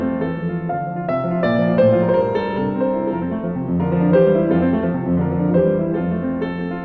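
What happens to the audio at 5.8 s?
Nothing goes wrong at 5.8 s; the audio plays through that moment intact, with no fault to be heard.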